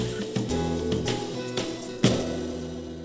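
A stretch of audio was dropped while newer audio was queued behind it, and playback leapt forward. This skip ahead happens between 1.34 and 1.36 s. Around seven-tenths of a second of sound is gone, and with no fill inserted, the material on either side of the cut butts together almost seamlessly, so the flow simply jumps rather than pausing. Having built up more delay than it targets, the receiver then trimmed it back by repeatedly cutting out short pitch-period-sized slices from 1.44 s to 3.03 s. This jitter buffer speed-up plays the sound at about 121% of its normal rate with unchanged pitch, removing roughly a third of a second in total and giving that final stretch a rushed, compressed feel. Throughout, the band tops out at 8 kHz, consistent with G.722 at 64 kbps on a WebRTC call path.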